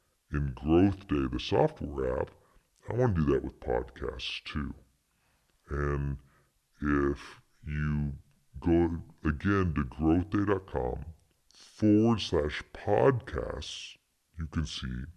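From start to finish, a wrong sample rate slows the speech to about two-thirds speed and lowers pitch by seven semitones, consistent with 48 kHz audio played at 32 kHz.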